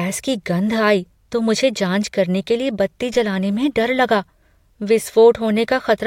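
At 3.14 s the speech carries a DC step: the waveform's zero line jumps abruptly to a new offset of about -32 dBFS, as happens when a converter recalibrates or an input with a standing offset is switched into the path. The sudden shift is heard as a single low thump under the speech, which itself continues unaffected. The offset then decays away rather than holding, consistent with a 5 Hz high-pass pulling the baseline back toward zero.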